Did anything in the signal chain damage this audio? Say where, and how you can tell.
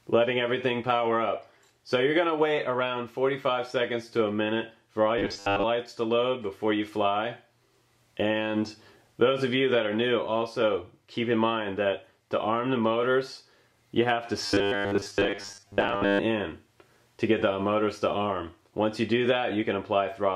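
Yes. From 5.18 to 5.64 s, and again from 14.46 to 16.20 s, the sound turns into a rigid, metallic drone locked at 100 Hz, a robotic sound from repeated short buffers. The likely cause is at the driver or buffer stage: fresh audio arrived too rarely, so the software looped the last fragment, about 10 ms long to match that 100 Hz buzz. Around 70% of the true signal in those spans was skipped.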